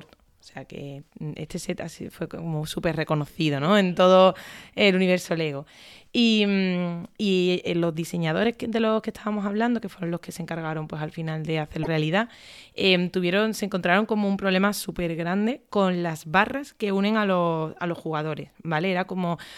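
At 11.80 s, right after "pues al final de", the speech breaks into a brief glitch lasting about 80 ms, from damaged data in a compressed stream. Corrupted bytes made the decoder misread frames and resync. A spectrogram shows a short disturbance, and the waveform shows a discontinuity.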